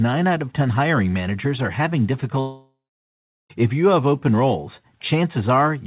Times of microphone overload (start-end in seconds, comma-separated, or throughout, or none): none